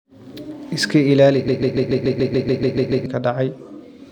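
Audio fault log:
1.48–3.06 s, broken-record loop: a fragment of about 144 ms repeats exactly and back to back, 11 times in succession, for roughly 1.6 s, giving a rapid stuttering pulse with no new material. The likely cause is a stall in the player, encoder or stream that kept resending the last fragment it held. The audio that should have filled this span is lost and does not resume where it left off.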